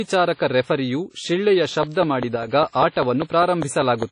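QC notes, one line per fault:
throughout: WMA compression, likely at a low bitrate that fits a 32 kbps encode. The damage is plainly audible as ringing, washy smearing and hiss that breathes with the speech. A spectrogram shows nothing above 10.1 kHz and gaps where weak lines were zeroed.
1.83 to 4.04 s: train of clicks, beginning just after "ರೆಫರಿಯು ಶಿಳ್ಳೆಯ". About ten similar clicks arrive at a regular 5 per second, around 15 dB above the speech, and they are heard in pauses too. The waveform shows evenly spaced spikes. The likely cause is interference or a faulty connection or supply.
2.36 to 2.48 s: one channel drops out for about 115 ms. The mono sum falls abruptly by about 6 dB, then returns with the sound otherwise unchanged. The waveform shows a brief step down in envelope, and a spectrogram shows the band dimming evenly. The likely cause is one identical stereo channel being lost.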